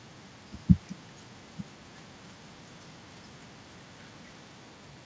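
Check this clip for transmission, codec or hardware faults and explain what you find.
No transmission, codec or hardware faults can be heard in this speech clip. It has passed through a call path whose top end stops at 8 kHz, which fits a wideband codec such as G.722, and that path is working as expected.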